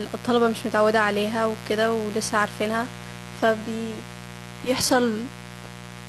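Mains buzz runs from the first moment of the clip to the last. A 60 Hz hum sits under the speech, roughly 15 dB below it, and it carries a raspy, steady edge rather than a smooth tone. That rasp comes from sharp switching spikes, probably from a dimmer, a rectifier or an unshielded cable, that enter the audio twice per mains cycle. Those spikes generate a dense ladder of 60 Hz harmonics that climbs well into the kilohertz range.

Adaptive stream at a lower bitrate starts at 2.84 s and lasts to the end of the clip. The quality drops at once with no gap. The treble thins out, and nothing survives above about 12.4 kHz. Codec artefacts on the speech grow worse. This sounds like a player stepping down from a clean 96 kbit/s AAC stream to a lean HE-AAC version of around 16 kbit/s when the connection slowed.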